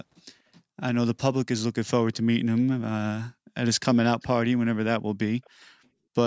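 Speech with three short bursts of echo leak at 2.13–2.17 s, 4.2–4.27 s and 5.44–5.5 s. Each is a faint copy of the voice trailing about 0.42 s behind the original. The one at 4.2 s is the most audible, though still very low. The likely cause is a loudspeaker echo canceller letting residue through. On a spectrogram these show as weak repeats of earlier harmonic patterns, all below the 8 kHz ceiling.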